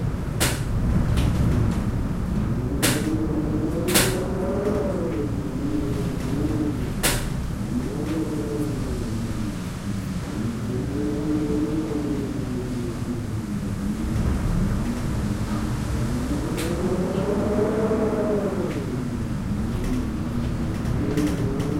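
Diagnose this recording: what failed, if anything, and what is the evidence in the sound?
Nothing failed anywhere along the chain here; the audio comes across as an ordinary, intact recording with no stage showing any trouble.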